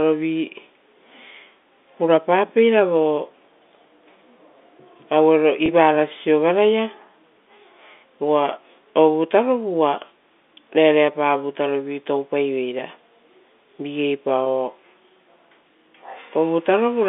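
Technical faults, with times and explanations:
5.66 to 5.68 s and 14.44 to 14.46 s, packet loss with pitch repetition: two brief gaps of about 20 ms each, which fits one dropped packet apiece. The receiver fills each hole by repeating the last pitch period, so you get a tiny held, slightly buzzy moment rather than a click or dropout. Because the loss is so short, there's no fade to silence; the speech picks straight back up over the narrowband telephone line.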